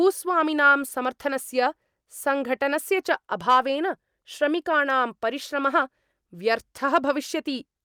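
At 3.50 to 3.59 s, and again briefly at 6.95 to 6.97 s, the speech hits hard clipping. Peaks overshoot what the stage can pass by about 3 dB, then about 2 dB, so their tops get sliced flat, giving a short crackly edge.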